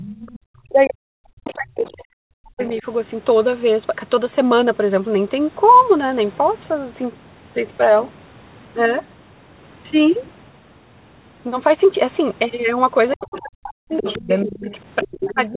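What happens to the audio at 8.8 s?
Nothing goes wrong at 8.8 s: the speech there runs on intact, with only the narrow, telephone-band sound of the call path, which carries nothing above 4 kHz.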